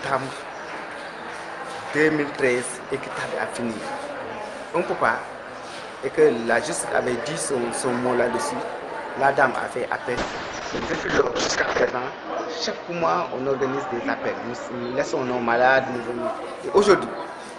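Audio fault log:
10.18–15.99 s, call bitrate drop: the sound turns rough and watery, with the top end cut from about 20 kHz to 8 kHz, bottoming out for 1.73 s. This points to the encoder falling from roughly 48 to 6 kbps, coding far more coarsely until recovery.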